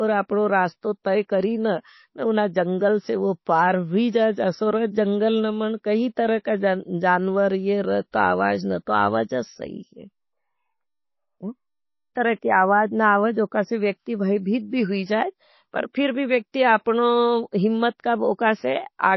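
From the start, the speech sounds watery and swirly, with smeared consonant onsets. The likely cause is heavy MP3 compression: with bits scarce, the encoder cuts the treble and drops weak frequency lines frame by frame, which fits a bitrate around 24 kbps.

At 8.12 s, just before "आवाज न तो आवाज", a brief hiss of about 17 ms runs ahead of a sharp onset, a pre-echo. The codec spread noise sized for the loud attack across its whole block, so it leaks into the quiet gap and softens the attack.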